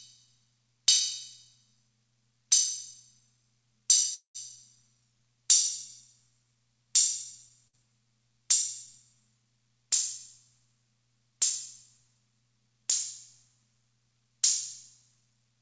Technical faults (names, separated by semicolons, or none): call audio freeze; burst of packet loss